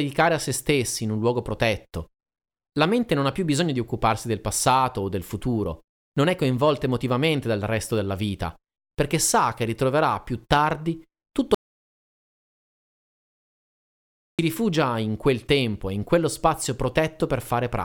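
At 11.55 s the speech cuts off abruptly and the track falls to silence until 14.39 s, when it resumes mid-flow. This is an audio dropout to silence lasting about 2.84 s, with no room tone or noise floor in the gap. The likely cause is a lost input, such as a disconnected device, a failed link or an accidental mute, while recording continued to write silence. Whatever was spoken during that stretch is gone.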